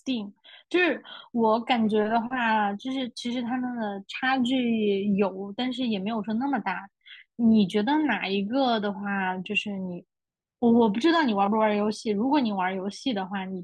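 No technical faults can be heard anywhere in this speech recording.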